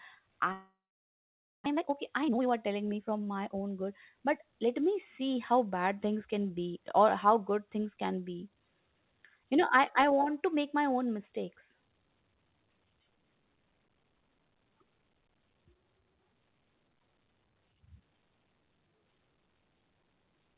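From 0.52 to 1.68 s the sound breaks off. What remains is a brief buzz carried on from the last sound, which fades into near-silence lasting roughly 0.9 s. When the sound returns, about 0.6 s of it is simply gone. This is likely a long network dropout: packets stopped arriving, the receiver extended the last audio it had and then went quiet, and playback resumed further on, skipping the missing stretch.

From 1.71 to 3.69 s a jitter buffer speed-up follows. The packets that had been held back arrived together, leaving the buffer about half a second deeper than its target. To shed that extra delay, the receiver repeatedly cut out tiny pitch-period slices, so the audio plays at about 126% speed with its pitch unchanged and sounds noticeably rushed. Throughout the clip, nothing is heard above 4 kHz, which is consistent with a G.711 A-law call codec.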